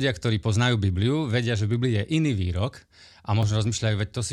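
At 3.43 s the speech has a brief tick or dip, a block of digital silence only about 1 ms long. The audio cuts out and returns with no fade, either because the output buffer was not filled in time or because a calculation produced invalid values.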